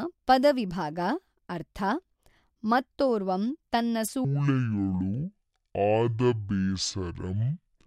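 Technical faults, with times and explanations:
4.25 s to the end, section at the wrong speed: right after "ಮತ್ತೊರ್ವಂ ತನ್ನ" the speech abruptly drops to 0.549 times its original speed, so everything after that point is drawn out and roughly ten semitones lower. Speed and pitch shift together in a single step rather than gliding, which points to a playback-rate change rather than a pitch effect. The likely cause is that this portion was run against the wrong sample clock, at a little over half the correct rate.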